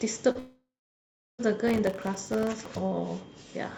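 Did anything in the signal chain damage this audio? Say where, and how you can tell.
Yes. At 0.31 to 0.38 s the speech briefly smears and wobbles, a small hole about 40 ms long that the receiver papered over by extending the preceding sound for 34 ms before blending back. This is short concealed packet loss at the network stage: a packet arrived too late to decode.

From 0.39 s the sound continues as a fading buzz, then goes silent for roughly 700 ms before speech resumes at 1.41 s with about a second of audio simply gone. That pattern points to a likely long network dropout, with concealment running out and nothing arriving to replace it.

Between 1.68 and 2.78 s a gritty crackle rides on the speech, made of many tiny dropouts where missed buffers were replaced by silence. This is processor overload crackle at the driver and buffer stage. The sound fits around fifty missed deadlines on very short buffers of roughly a millisecond and a half.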